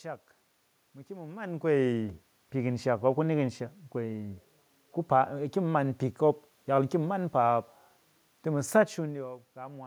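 Speech recording with no technical faults present.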